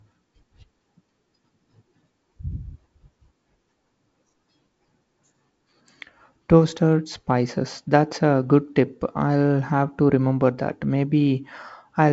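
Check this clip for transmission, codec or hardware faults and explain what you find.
No transmission, codec or hardware faults turn up in this speech clip.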